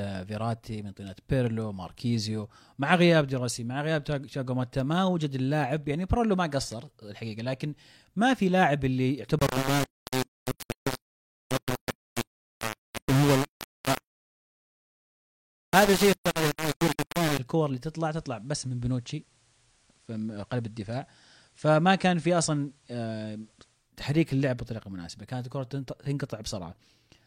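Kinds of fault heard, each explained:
Low bit depth without dither: From 9.39 to 17.39 s the sound turns harsh and grainy, with distortion that follows the signal and is nearly as loud as it, likely from rounding to about 3 bits without dither. The waveform shows coarse staircase steps, and the spectrogram fills with hash that tracks the sound.
Digital radio blending to analogue: At 17.77 s the receiver cross-fades over 276 ms to the FM broadcast of the same station, returning at 23.94 s. Faint hiss rises well below the sound while the level stays unchanged.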